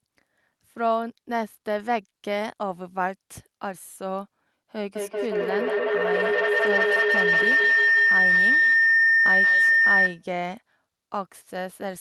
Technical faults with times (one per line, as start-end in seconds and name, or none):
4.95-10.29 feedback howl